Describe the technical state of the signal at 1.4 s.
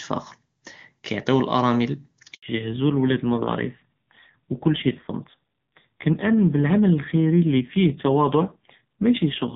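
At 1.4 s the speech is intact, carried cleanly by the AMR wideband (HD Voice) codec at 23.85 kbit/s, with no fault present there.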